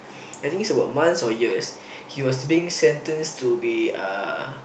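No technical faults can be heard at any point in the speech.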